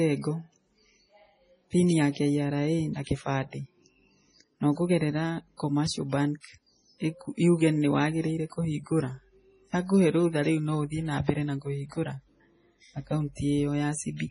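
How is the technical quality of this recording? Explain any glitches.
The technical quality is poor. The speech is band-limited and damaged by coding throughout, with one audible pre-echo.

Throughout the clip, a starved encoder, likely MP3 compression at a very low bitrate near 24 kbps, removes everything above 10.5 kHz and drops weak frequency detail frame by frame. The result is dull, watery, swirling speech with metallic chirps on sibilants.

From 6.40 to 6.44 s, a pre-echo appears. The transform codec spreads the noise meant for a sharp attack across its whole block, so a short hiss arrives about 39 ms early and the attack itself sounds blurred and soft.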